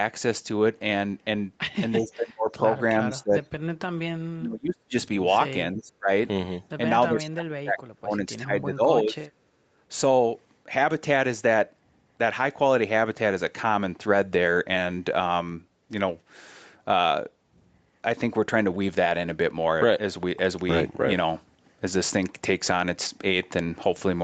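Speech suppressed in double talk occurs six times: 1.98–2.63 s, 3.05–3.39 s, 4.34–4.95 s, 5.72–6.09 s, 7.09–8.83 s and 9.0–9.28 s. Each time the speech sinks sharply, by roughly 20 to 30 dB at its deepest. The stretch from 7.09 to 8.83 s loses well over a second. The likely cause is an echo canceller that heard the far side at the same moment, could not tell the near talker from loudspeaker echo, and turned both down.

Background gated by the echo canceller follows at 9.56–9.77 s. The room sound beneath drops by about 10 dB for around a fifth of a second, then returns. The canceller clamped the microphone hard while the loudspeaker was playing and then let go. That leaves a brief hole in the ambience rather than in the speech.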